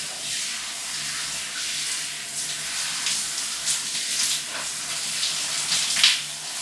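No technical faults are audible anywhere in this recording of everyday sounds.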